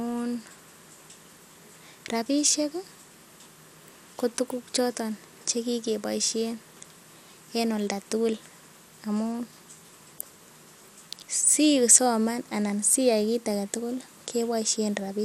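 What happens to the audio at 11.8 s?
At 11.8 s the speech carries the same MP2 compression damage heard through the whole clip, most likely from MPEG Layer II coding at a low rate, which fits around 80 kbps. The encoder divides the sound into 32 equal sub-bands and runs short of bits, so upper bands flicker on and off and the remaining ones are coarsely quantised. The result is a dull, gurgling, granular texture with nothing above 16.5 kHz. A simple low-pass filter would dull the top without that grainy, shifting distortion.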